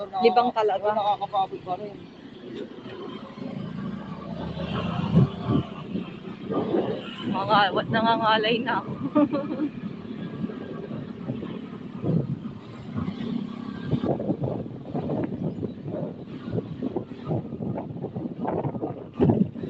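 From start to finish, a speech-tuned noise suppressor is applied to the sound, treating sustained tones and tails as noise. Levels swing by roughly 10 dB, so the audio pumps and thins. On a waveform, sustains dip after each attack, and on a spectrogram, held bands fade in patches, all beneath a ceiling near 8 kHz left by the call path.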